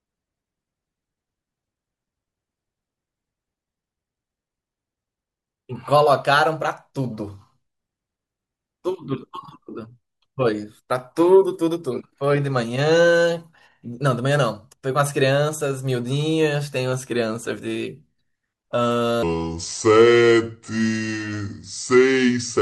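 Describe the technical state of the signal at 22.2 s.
At 22.2 s the speech sits inside a section at the wrong speed, running from 19.23 s to the end. It plays at 0.714 times its recorded rate, likely from playback against a mismatched clock. The voice sounds slowed and about five semitones deeper.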